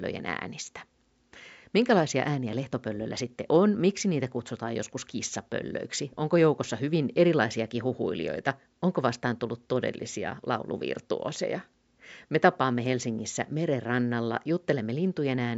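No technical faults are audible anywhere in the speech, and the only background is the room's own ambient noise, sitting about 50 dB below the talker.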